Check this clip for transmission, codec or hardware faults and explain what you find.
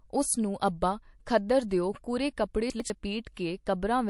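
Yes, there are three kinds of fault in this speech clip.

Throughout, the speech sounds watery and swirly, likely from MP3 compression at a low bitrate around 48 kbps. Unlike a plain low-pass filter, the damage shifts from moment to moment.

At 1.68 to 1.71 s and 3.34 to 3.37 s, pre-echo puts a hiss about 13 to 14 dB up in the 25 to 28 ms before sharp attacks. That noise fits a long transform block that never switched to short blocks. Unlike a click, the noise comes just before the onset.

Between 2.7 and 2.9 s, chunks out of order swap two 100 ms pieces. The sound jumbles briefly, but unlike a dropout, nothing goes missing.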